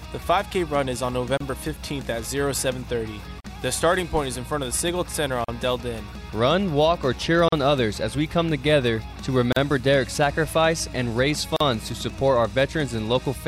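Short dropouts of about 30 to 40 ms cut the sound at 1.37, 3.40, 5.44, 7.48, 9.52 and 11.56 s, every 2 s. These are gaps at joins of encoded pieces, where encoder delay and end padding were left untrimmed.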